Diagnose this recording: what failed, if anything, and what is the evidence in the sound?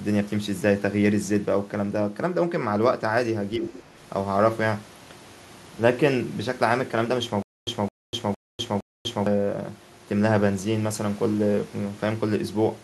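From 3.57 to 3.74 s the speech dips by about 5 dB, in pieces totalling around a tenth of a second. This is speech suppressed in double talk at the call-processing stage, likely the echo canceller attenuating the near talker while the far side was also active.

Right after, from 3.76 to 3.82 s, a faint second voice leaks through at about 20 dB below the speech. This is the other side's voice leaking through, likely loudspeaker echo that the call processing's echo canceller failed to remove fully from the microphone.

Between 7.42 and 9.27 s a 214 ms fragment repeats four times, each followed by 247 ms of digital silence, a steady 460 ms cycle. This is a stutter with silent gaps from a likely buffer or stream stall, replaying the last fragment on each retry while the intervening audio is lost.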